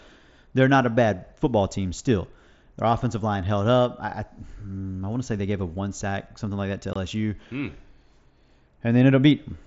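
At 6.93 to 6.96 s, the speech has unconcealed Bluetooth headset packet loss. A gap of about 22.5 ms drops out, which fits three lost mSBC packets. Nothing fills the hole. Its edges are abrupt, so it sounds like a brief cut in the speech.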